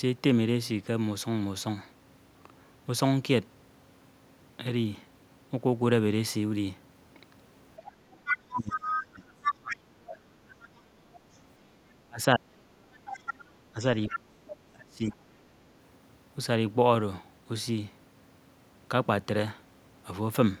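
From 7.85 to 9.52 s the other side's voice leaks through, strong at about 5 dB below the talker. This is likely loudspeaker playback reaching the microphone that the echo canceller failed to remove. Fainter leaks of the same kind follow at 11.13–11.38 s (about 30 dB down), 13.05–13.47 s (about 10 dB down) and 14.08–14.55 s (about 10 dB down). Each is heard as a second, weaker voice under the talker.

Overlapping the first leak, speech is suppressed in double talk from 8.3 to 10.65 s. The talker's level drops by roughly 30 dB, with about 2 s affected in total. The likely cause is the echo canceller mistaking near-end speech for echo while both sides talked, and turning everything down. It recurs at 12.07–12.64 s (about 30 dB deep, under half a second affected) and at 13.73–15.18 s (about 35 dB deep, under a second affected). In each case the voice sinks.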